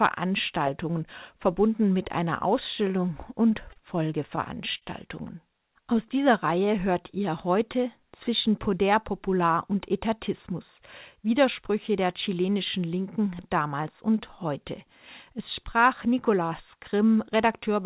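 Between 3.29 and 4.85 s, packets reached the receiver late or more slowly than they were being played, so the jitter buffer ran dry six times. Each time, the receiver bridged the hole by extending the last sound it had. The longest bridge was 47 ms, and about 118 ms was filled in all. None of the speech is lost, but this stretch drags and produces a repeated stalls (stutter) effect, with small hitches breaking up the flow.

From 5.58 to 7.18 s, just before "heute zwischen", the jitter buffer was running short and needed to build a reserve. It did this by repeating individual pitch periods and fragments of pauses many times over, which added 73 ms. The result is a jitter buffer slow-down: the speech plays at about 96% of normal speed with the pitch unchanged, so sounds come out slightly drawn out and sluggish.

From 9.28 to 11.63 s, leading into "der chilenischen", the opposite happened. 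The buffer was holding more audio than its target, so the receiver repeatedly cut out short pieces of one or a few pitch periods, removing roughly a tenth of a second in total. This jitter buffer speed-up makes the speech run at about 104% of normal speed at the same pitch. Throughout, the G.711 mu-law call codec leaves nothing above 4 kHz, which fits its 64 kbps narrowband coding.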